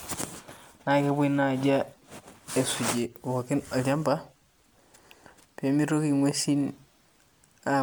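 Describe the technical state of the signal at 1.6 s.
At 1.6 s the speech carries generation loss, present across the whole clip rather than at that moment alone. The hollow, swirly texture and blurred attacks are likely the result of repeated lossy re-encoding, sounding like MP3 at around 128 kbit/s passed through roughly seven times, each pass requantising on a shifted frame grid. On a spectrogram, flickering holes and smeared bands show, with content extending to about 20.1 kHz. The waveform shows softened onsets.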